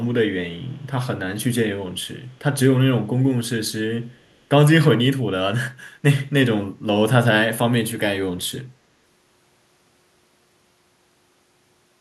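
A speech recording with an echo leak in three short bursts: 0.59 to 0.87 s, 2.28 to 2.39 s, and 4.21 to 4.36 s. Each time, a faint delayed copy of the speech trails the original by about 252 ms. It sits roughly 40 dB below the speech, so it is easy to miss. The likely cause is an echo canceller on a far-end loudspeaker letting residual pickup through and sending it back down the line.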